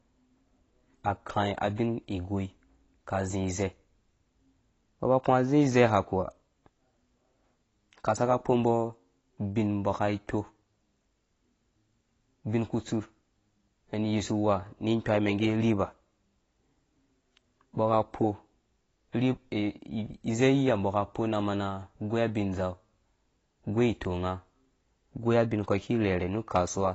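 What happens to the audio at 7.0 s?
Likely low-bitrate AAC compression, throughout the clip, has stripped everything above 8 kHz, so the speech at 7.0 s sounds dull and smeared, with a warbling, fizzy edge on sibilants.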